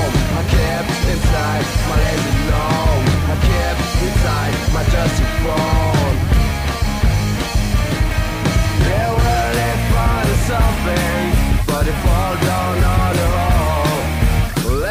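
Low bit depth without dither runs throughout: grainy distortion that tracks the sound, roughly 25 dB below it, likely from undithered rounding, which fits about 5 bits.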